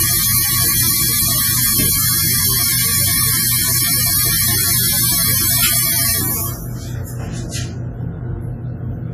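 Heavy lossy encoding, likely WMA compression at a low bitrate of around 24 kbps, affects this sound clip from start to finish. Long transform blocks smear quantisation noise into a washy, ringing hiss that breathes with the signal, weak detail drops out, and nothing survives above 14.6 kHz.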